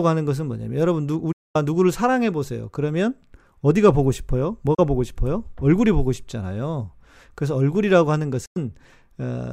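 Speech, with three digital broadcast dropouts where the receiver gave up on bad or missing frames and muted until clean ones returned. The sound fades out over about 8 ms each time and drops to silence from 1.32 to 1.56 s, 4.74 to 4.79 s, and 8.46 to 8.57 s. The gaps are about 224, 32 and 96 ms long, which fits runs of seven, one and three lost 32 ms frames. Whatever was broadcast in those holes is simply gone.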